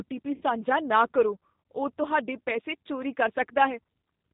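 A speech clip carried over a G.729 codec throughout, with plainly audible codec damage. Nothing above 4 kHz survives, so the band is telephone-narrow. The voice has the slightly rough, synthetic grain of a coder that rebuilds each 10 ms frame from a vocal tract filter, a pitch predictor and a handful of pulses rather than the waveform itself. That character fits G.729A at 8 kbit/s. From 0.34 to 0.43 s, right after "ਟੀ ਪੀ", there is VoIP packet loss concealed by the speech codec. The decoder stretches its last pitch and filter state into a buzzy tone or coloured noise that fades for roughly 70 ms, which points to about seven consecutive lost frames. Because each frame depends on the one before, the voice stays weak or distorted for a short time after real audio resumes at 0.43 s.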